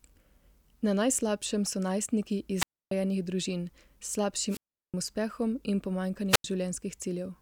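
Wireless microphone squelch dropouts occur at 2.56–2.91 s, 4.48–4.94 s and 6.29–6.44 s. Each time, the FM radio link from the microphone weakens until the receiver's squelch cuts the output. A short swell of hiss comes first, then a near-silent gap of about 286 ms, 370 ms and 87 ms respectively, before the speech comes back once the signal recovers.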